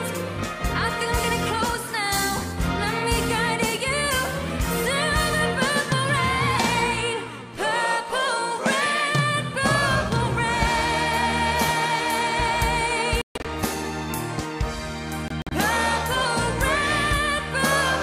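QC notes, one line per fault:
13.21–13.46 s, Bluetooth dropout: the sound cuts to silence in gaps totalling about 186 ms, the longest about 139 ms, then resumes further along as if it had kept playing; likely wireless packets arriving too late and being discarded.
15.28–15.53 s, Bluetooth dropout: shorter gaps totalling about 93 ms, the longest about 46 ms, with the same silence and skip-ahead resumption; likely the same late, dropped packets on the wireless link.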